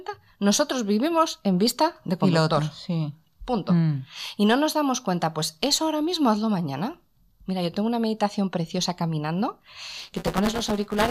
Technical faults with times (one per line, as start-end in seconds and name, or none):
9.97-11.10 buffer tearing